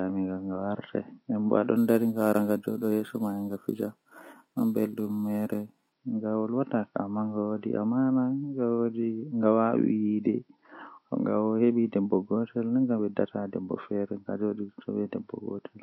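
From 1.77 to 5.92 s, the speech was upsampled from 12 kHz to 44.1 kHz by repeating samples without smoothing. This imaging from sample-and-hold upsampling mirrors the spectrum, first into 6 to 12 kHz at about 25 dB down, adding a bright metallic fizz that tracks the voice.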